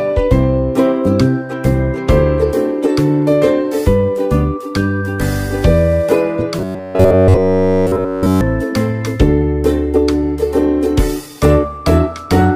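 Fresh audio stops arriving in time, likely leaving the player looping a roughly 10.7 ms buffer, causing robotic sound from repeated short buffers: a rigid 93.8 Hz buzz replacing essentially all audio from 6.59 to 8.41 s.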